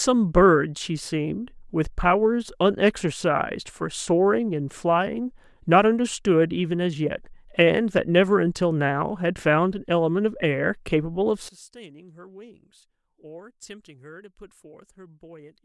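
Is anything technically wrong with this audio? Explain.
Yes. From 11.49 s to the end at 15.65 s, the speech collapses to a faint remnant about 22 dB quieter. The likely cause is one channel inverted: centred speech cancels in mono, leaving only the channel difference. Unlike a dropout or gain cut, a faint residue remains.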